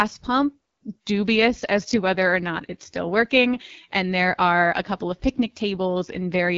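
A speech clip carrying audible AMR wideband (HD Voice) codec damage throughout: the voice sounds rough and raspy, consistent with one of AMR-WB's lowest modes, near 8.85 kbit/s. A spectrogram shows detail ending near 6.4 kHz, with a thin, smeared noise band to 7 kHz and nothing above.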